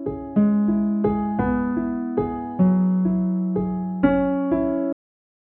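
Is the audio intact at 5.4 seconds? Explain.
No. A cut-off end begins at 4.93 s and runs to the end of the clip at 5.51 s, so 5.4 s falls inside it. The sound stops abruptly mid-event at 4.93 s because the final stretch of buffers was never written out or played back. Instead of fading or decaying naturally, the audio drops straight to digital silence, and that silence holds through 5.4 s until the file ends.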